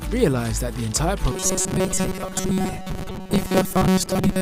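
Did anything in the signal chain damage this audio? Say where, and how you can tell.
Yes. From 1.32 s to 4.41 s the sound becomes a rigid metallic buzz pinned at 188 Hz: robotic sound from repeated short buffers. A starved driver buffer likely replayed 5 ms chunks while skipping most real audio. Spectrograms show flat harmonic stripes; waveforms, identical repeating cycles.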